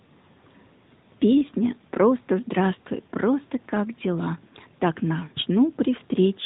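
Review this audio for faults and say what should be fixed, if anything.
The whole recording carries the sound of the AMR narrowband mobile codec. Nothing above about 3.8 kHz survives, so the speech sounds boxed in and muffled. The codec rebuilds each short frame from a simple vocal-tract model fed by a few pulses. That leaves a plainly audible buzzy, synthetic edge on the voice. The level of damage fits a mid-range AMR-NB mode near 10.2 kbps. To prevent it, capture or route the call over a wideband path, or record locally.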